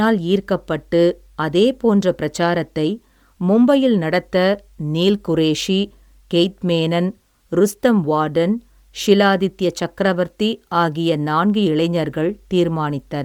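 Throughout the speech a breathy, grainy edge is plainly audible, likely from Bluetooth LC3 compression, which fits a 48 kbps stream in 10 ms frames.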